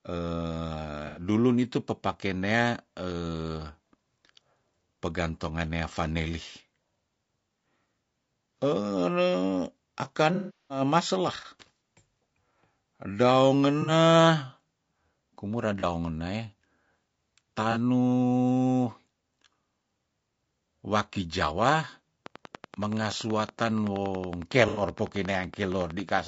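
Low-delay AAC compression runs through the whole speech clip, likely AAC-ELD at a rate that fits about 32 kbps. Its short frames resolve the voice's pitch harmonics poorly, and at this bitrate there aren't enough bits to cover them, so the voice sounds plainly rough and grainy, with noise filling the gaps between harmonics and a top band that sounds thinned or synthetic.

AAC frame loss with concealment first occurs at 1.07 to 1.21 s, where about 90 ms of audio goes missing. The decoder patches the gap by reusing the last good spectrum with randomised detail, which produces a brief smeared, noisy patch. A much longer loss follows at 10.34 to 10.81 s, about 360 ms, which fits twelve 30 ms frames. Here the concealment cannot sustain itself: the sound decays toward silence and then fades back in. Shorter smears follow at 13.82 to 13.91 s (about 60 ms), 15.80 to 15.84 s (about 30 ms) and 17.72 to 17.77 s (about 30 ms).

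A train of clicks starts at 22.26 s and continues to 26.19 s. It is a steady ticking at about 10.7 per second, around forty clicks of much the same shape, with peaks standing a few dB above the speech. They sit on top of the sound and stay audible in the pauses, as if a nearby device or an interface were injecting pulses at a fixed rate.

During that ticking, a further AAC frame loss with concealment at 24.68 to 24.82 s drops about 90 ms, which the decoder fills with another short, noisy, smeared patch.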